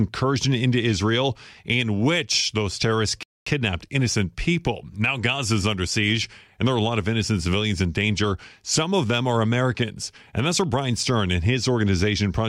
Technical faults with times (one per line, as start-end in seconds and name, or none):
3.23-3.46 rebuffering stall